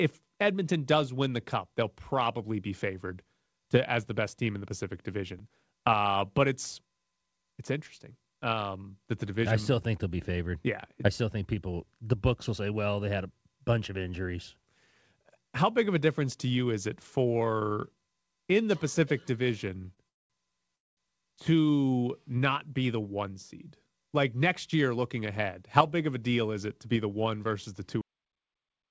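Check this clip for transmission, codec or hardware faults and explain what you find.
Four kinds of fault are present. There is a late-packet stall, two freezes, a jitter buffer speed-up and a cut-off end. The speech has carried nothing above 8 kHz throughout, which fits a wideband call codec such as G.722.

The short stall from a late packet comes at 19.94 to 19.99 s. One packet was not there when it was due, and the jitter buffer ran empty. The receiver stretched the last sound for 30 ms until the packet arrived. It then carried on from the same point. Nothing is lost. The sound is simply held too long, with a small buzz or dip.

Two call audio freezes follow. The first runs from 20.09 to 20.32 s and the second from 20.76 to 20.99 s, just before "to not be the". Packets were likely held up in transit, so the buffer emptied. Each time the last sound was carried on briefly and then faded to silence. 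That silence lasts about 200 ms in the first freeze and 210 ms in the second. The speech then resumes where it stopped. About 208 ms and 214 ms of gap are inserted, with nothing missing.

The jitter buffer speed-up runs from 24.33 to 25.29 s. It sits between "the one seed like" and "how big of a". After the stalls, the buffer held more audio than its target. To reduce that delay, the receiver cut out many short pieces of one or a few pitch periods, in quick succession. In total it removed about 70 ms. The speech runs at 106% speed with unchanged pitch, so this stretch sounds hurried.

The cut-off end comes at 28.01 s, right after "one versus the two". The final buffers were never written or played. The audio stops mid-sound and drops straight to digital silence with no decay. That silence holds until the clip ends.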